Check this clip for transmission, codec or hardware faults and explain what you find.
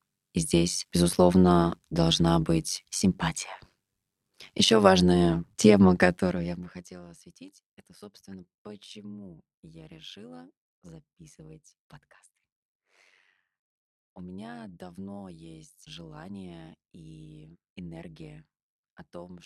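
There is one fault, present throughout the speech. Overlap-add ripple runs for the whole clip: the audio was split into windowed frames and rejoined with overlaps whose gains don't sum evenly, so the level swings by about 11 dB around a hundred times a second, giving a metallic buzz with extra tones around the voice.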